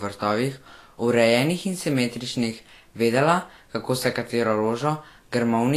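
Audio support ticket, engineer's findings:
Low-bitrate audio saved at a high bitrate, throughout the speech. Likely cause: an earlier lossy encode, then re-encoded to a high-bitrate MP3 that cannot restore the removed detail. Result: nothing above 14.2 kHz, a hard ceiling that fits a low-bitrate source around 34 kbit/s rather than the MP3 stage. First-encode artefacts and dull top end persist; the second encode adds file size, not fidelity.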